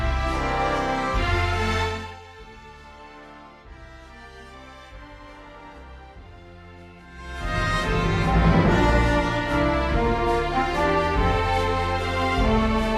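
Nothing stood out on listening to this audio.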